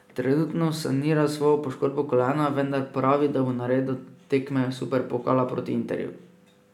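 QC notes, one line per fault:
No faults heard anywhere in the speech.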